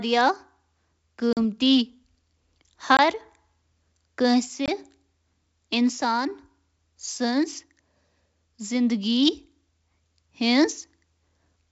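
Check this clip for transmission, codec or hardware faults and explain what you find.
There's one fault in this speech clip, packet loss on an ADPCM call, hitting three times on top of the G.722 wideband coding. The coding itself sounds clean and full up to around 7 kHz.

At 1.33, 2.97 and 4.66 s you get hard-edged silent gaps of about 40, 20 and 20 ms, which fits roughly four, then two, then two lost packets. The decoder's predictor and step size lose sync with the sender's, so the speech comes back with a brief, slightly distorted patch before settling.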